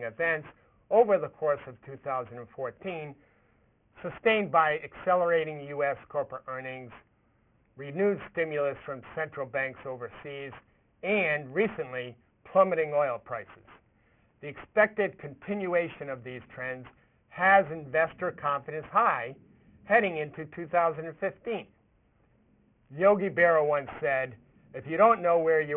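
Aliasing throughout: content above 3 kHz folds back as gritty, metallic false tones, fitting an unfiltered drop to a 6 kHz rate. Band-limiting would sound dull instead.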